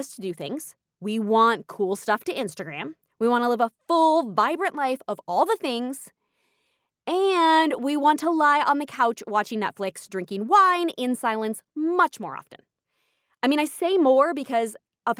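No technical faults are audible anywhere in this recording.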